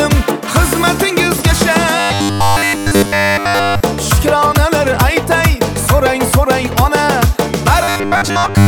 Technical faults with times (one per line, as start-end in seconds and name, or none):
1.99-3.83 robotic sound from repeated short buffers
7.84-8.68 robotic sound from repeated short buffers